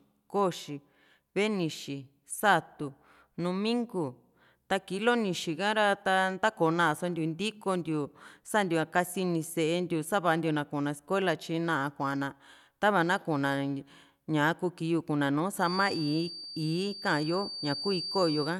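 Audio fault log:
15.56–18.59 s: feedback whistle. A loudspeaker-to-microphone loop likely held at the edge of feedback, sustaining a thin, slowly swelling and fading 4.6 kHz whistle roughly 10 dB beneath the speech.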